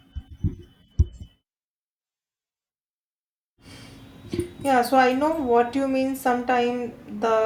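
Nothing in the speech stood out as a technical fault on listening.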